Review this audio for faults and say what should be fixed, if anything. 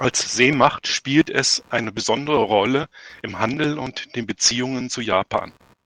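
A faint buzzy chirping runs under the speech for the whole clip, pulsing at around 70 times a second and sitting roughly 35 dB below the speech. This is computer activity noise: processor, graphics or mouse load shifts the shared audio ground, so the noise follows the machine, not the talker. Prevent it with an external USB interface, a ground-loop isolator, or a recording computer kept lightly loaded.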